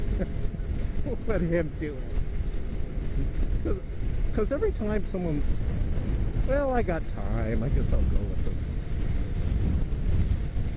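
No technical faults are audible.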